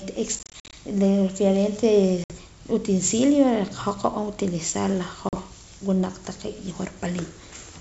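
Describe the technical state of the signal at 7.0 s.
At 7.0 s the signal is intact: the speech passes through the G.722 wideband path at 64 kbit/s, reaching up to about 7 kHz, with nothing at that moment pointing to a fault.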